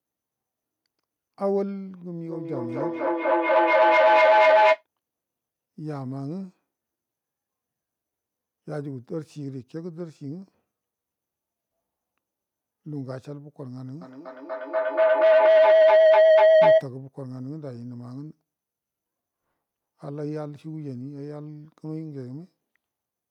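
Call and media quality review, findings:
Feedback howl, 2.26–4.86 s and 14.01–16.91 s, peaking about 16 dB and about 17 dB above speech. Tone near 700 Hz, pulsing roughly every fifth of a second. Two devices in one room; mic-to-speaker loop gain above unity. Unlike echo, repeats grow rather than fade.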